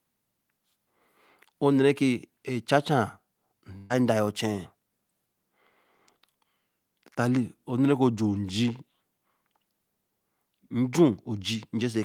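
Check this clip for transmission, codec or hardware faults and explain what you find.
There's one transmission fault, a burst of packet loss running from about 3.77 to 3.94 s. A short run of packets never made it in time, so the receiver filled roughly 125 ms by stretching out the last bit of speech it had and fading it down. You hear that as a brief smeared buzz or hiss, then the speech picks up again with about 120 ms of the original simply gone.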